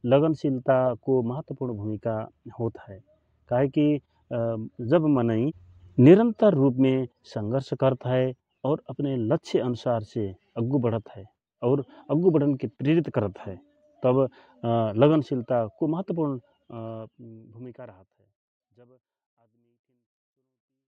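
The speech signal shows no technical faults, and the smooth fade-out over roughly the last four seconds is a deliberate edit that tapers the level away evenly without any click or hard edge.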